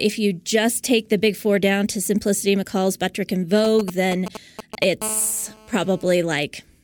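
GSM signalling bursts run from 3.65 to 4.84 s in this speech clip: a galloping dit-dit-dit of short buzzes at 217 Hz, at roughly 10 dB below the speech, as a nearby 2G phone's brief radio bursts are rectified by the audio circuit. GSM phone buzz follows from 5.02 to 6.14 s, a hard, raspy, harmonic-rich 217 Hz buzz at about 18 dB below the speech, nearly steady because the phone is transmitting continuously in a call, with each burst demodulated into the audio path.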